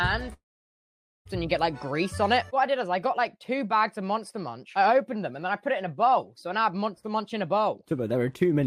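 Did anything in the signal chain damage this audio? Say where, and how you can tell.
Yes, at the network stage. From 0.33 to 1.27 s the sound fades to silence, then returns with that stretch gone. This is likely a long network dropout.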